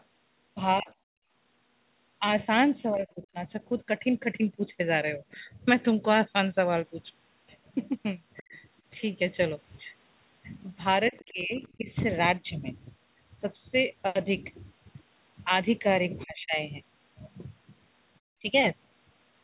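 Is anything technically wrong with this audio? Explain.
Yes. From 0.0 to 11.6 s a faint second voice, roughly 25 dB below the main speech, runs underneath. This is the other side's voice leaking through, likely loudspeaker echo the canceller failed to remove. Unlike gating, it adds sound rather than removing it.

Speech suppressed in double talk likely occurs between 0.81 and 3.36 s, 8.41 and 11.89 s, and 16.24 and 18.45 s. Each time the main voice dips in short pieces, totalling roughly 0.4 to 0.5 s, by roughly 15, 20 and 30 dB. The canceller cannot separate the talker from the echo, so it turns both down. The talker's own speech, not the room, is what drops.

At 1.16 to 1.33 s the background is gated by the echo canceller. The room sound falls by about 27 dB for a brief moment while the loudspeaker plays, then returns.

The band stops near 4 kHz throughout, which fits the G.711 call codec.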